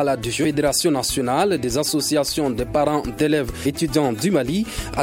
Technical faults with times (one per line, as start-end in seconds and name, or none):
0.43 compressed frames skipped
3.65 compressed frames skipped